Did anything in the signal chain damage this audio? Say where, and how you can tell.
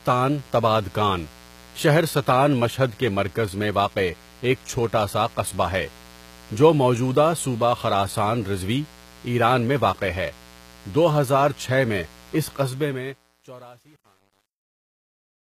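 Yes. A steady, raspy buzz runs under the speech throughout, at about 25 dB below the signal. This is mains buzz from the analogue wiring: switching spikes on 60 Hz mains, with harmonics reaching high.

The sibilants sound gritty and metallic, and nothing is left above 14.9 kHz. The likely cause is HE-AAC compression, around 20 kbps, which rebuilds the top band by copying lower bands upward.

From 12.60 s, just after "میں اِس", the fade-out turns grainy. It is worst from 12.99 s to the end. This is truncation distortion on a fade, caused by a sample-format stage keeping about 9 bits without dither.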